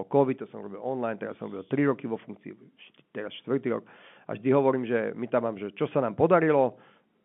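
This speech clip has nothing technically wrong with it.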